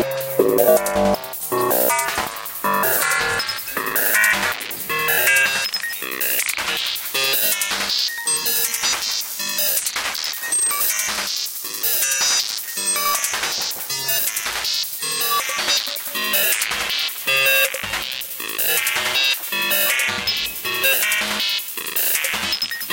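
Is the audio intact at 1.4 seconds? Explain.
Yes, the audio at 1.4 seconds is intact, with no dropout, click, distortion or other fault at that moment.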